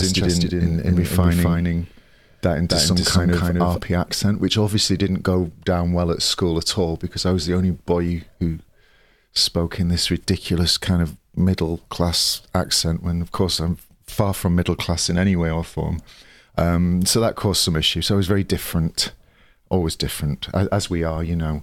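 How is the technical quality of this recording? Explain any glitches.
The recording has one clear glitch at the start. From the start to 3.78 s, the speech is doubled: a second, equally loud copy trails roughly 300 ms behind, then stops abruptly, likely from a doubled audio track captured twice.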